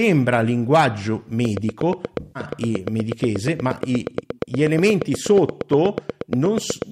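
A train of clicks runs through this speech from 1.45 s to 6.83 s: a regular ticking at about 8.4 clicks per second, around fifty in all, with peaks roughly ten decibels above the speech and audible in the pauses as well. The clicks have the same shape and an even spacing, which most likely points to a repeating electrical pulse, such as interference from nearby equipment or a faulty connection or power supply. AAC frame loss with concealment affects 2.20 s to 2.43 s. About 149 ms of coded audio went missing, which fits a run of roughly seven lost frames. The decoder bridged the gap by rebuilding sound from the last good spectrum, so that stretch comes out as a smeared, noisy, phasey patch instead of clean speech.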